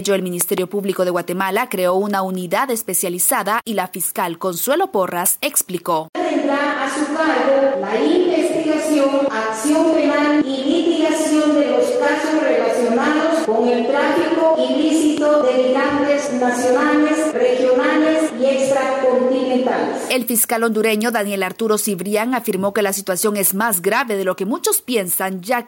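Gain pumping runs through the whole recording, most likely because the input gain is set far too high for the microphone, so a fast limiter or compressor keeps pulling the level down on every loud moment. The level swings by around 5 dB. The loud and quiet passages sit unnaturally close together, and the sound comes across as squashed. There are also three loud pops, likely sudden voltage steps from a plug, a switch, static or a driver glitch, which the downstream circuitry shapes into sharp transients. Between 0.41 and 0.6 s a double pop stands roughly 15 dB above the audio. A single, softer one, about 10 dB above, lands between 15.18 and 15.20 s. In both places the sound carries on underneath.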